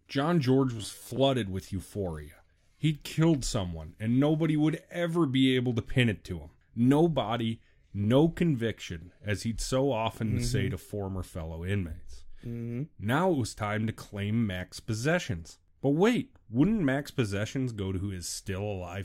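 From 0.78 to 1.20 s, just before "with euphoria", the speech takes on a robotic sound from repeated short buffers: a rigid, metallic buzz at 100 Hz that loosely tracks the syllables. This is likely caused by audio reaching the output too slowly, with the player looping a short segment of roughly 10 ms to fill the gaps. The fixed repeat period sets the buzz pitch, and about half of this stretch is repeated material rather than fresh audio.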